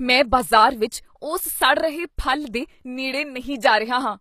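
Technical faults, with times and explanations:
Throughout, HE-AAC compression: the damage is plainly audible and nothing comes through above about 14.9 kHz. The likely cause is low-rate HE-AAC, which fits around 24 kbps, rebuilding the treble by copying lower bands upward, so harmonics don't line up across the crossover.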